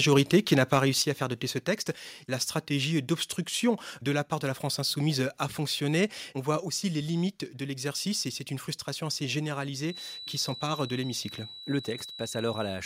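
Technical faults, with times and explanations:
0.17–0.77 s, microphone overload: The loudest peaks in this stretch push about 2 dB past the converter's limit, and their tops are sheared flat, a small fraction of samples, under half a percent. Those flattened crests add a brief harsh, crackly edge to the strongest syllables rather than continuous distortion. The likely cause is the microphone's input volume being set too high, so the converter runs out of headroom on the loudest moments.
1.02 s and 6.60 s, microphone volume stepped down: Twice the whole signal, voice and background together, drops abruptly in a single step, first by about 6 dB just before "à faire doter ce", then by about 4 dB just before "aussi les limites de". The first drop follows shortly after the clipped peaks. The pattern points to call software detecting an overly hot or clipping microphone and likely lowering the device's input gain in one jump instead of a smooth fade.
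9.80 s to the end, feedback whistle: Right after "c'est une frustration assez" a thin, steady tone at 3.9 kHz appears and sits roughly 10 dB below the speech, swelling and fading slowly in level without building up. That behaviour suggests a loudspeaker-to-microphone loop likely hovering just at the edge of feedback, with one frequency sustained by the loop but not gaining enough to run away into a howl.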